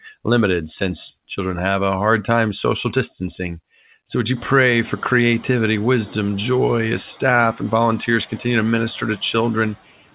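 Right after "would you", at 4.36 s, with the room noise jumping by about 24 dB around 4.5 s, a noise suppressor catching up lets it through with less reduction at first. Over 0.67 s, to 5.03 s, its estimate adapts and the noise sinks by about 4 dB.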